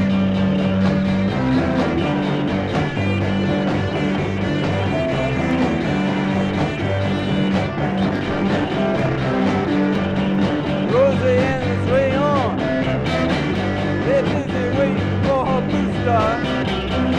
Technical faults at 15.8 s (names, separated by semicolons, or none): none